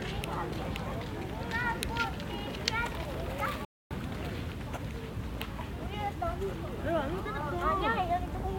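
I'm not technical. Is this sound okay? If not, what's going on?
No, not quite. At 3.65 s the sound suddenly cuts out and stays silent until about 3.91 s, a gap of roughly a quarter of a second. That's a playback stall, most likely the player briefly running out of audio data before picking up again.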